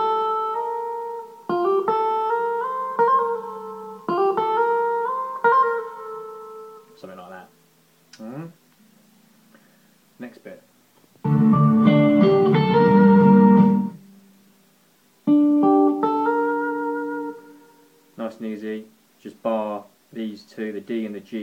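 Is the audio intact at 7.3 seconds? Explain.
Yes, the audio is intact at 7.3 seconds, with nothing there that breaks or disturbs the sound.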